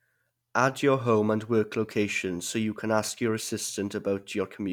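Nothing goes wrong anywhere in this bit of speech; there's simply no technical fault to point to at any moment.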